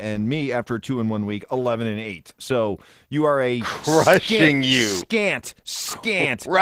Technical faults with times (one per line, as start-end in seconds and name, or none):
0.00-6.62 Opus voice compression